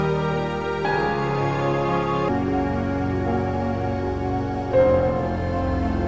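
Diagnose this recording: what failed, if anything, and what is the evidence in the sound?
Wrong sample rate at playback, from 2.28 s to the end: the sound drops about 7 semitones and slows to 0.667 times speed, which fits 24 kHz material clocked out at 16 kHz. Pitch and tempo fall together, unlike a pitch-shift fault.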